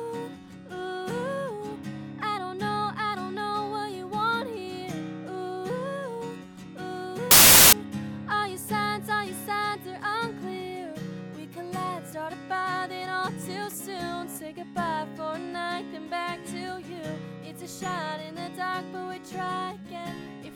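From 7.31 to 7.73 s, a span of about 0.41 s, the audio breaks into loud, harsh broadband noise, the sound of samples built from the wrong bytes. Across this stretch each sample value has been assembled from mismatched bytes, whether through a one-byte offset, reversed byte order or a misread alignment. The rapidly fluctuating low-order bits therefore land in the most significant positions, turning the waveform into harsh noise until the stretch ends.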